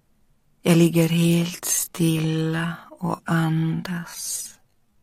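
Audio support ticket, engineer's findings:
Time-stretched section, 1.01 s to end of clip. Pace drops abruptly to roughly 0.58x while pitch holds steady. Audio drags. Likely cause: time-stretch processing slowing the segment to fit a target length, repeating short pieces to fill time without shifting pitch.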